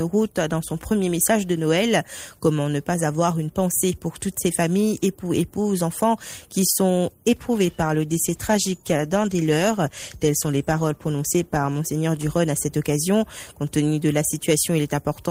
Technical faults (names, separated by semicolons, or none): call bitrate drop